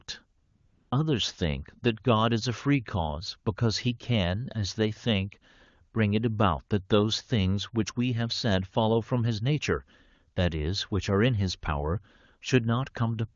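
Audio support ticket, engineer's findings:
AMR comfort noise, 0.41 to 0.91 s: real background drops out for half a second, swapped for smooth, steady synthetic hiss. Phone flagged silence, stopped sending speech frames, receiver filled the gap from a rough level-and-spectrum sketch. AMR-WB path at 23.85 kbit/s, codec damage none or faint.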